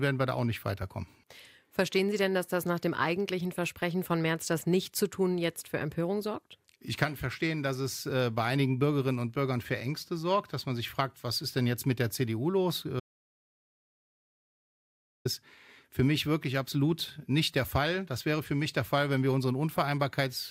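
An audio dropout to silence runs from 13.00 s to 15.25 s. The sound cuts off mid-flow and is replaced by about 2.25 s of silence, with no room tone or background beneath it, before resuming just as abruptly. The input was likely lost for that stretch, through a disconnected device, a broken link or a momentary mute, while the recorder kept writing silence. Whatever occurred during those seconds is missing from the audio.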